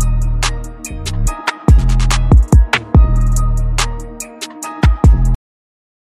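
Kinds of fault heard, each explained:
Cut-off end: the final buffers never got written, so the sound stops dead mid-event at about 5.35 s and drops straight to digital silence with no decay.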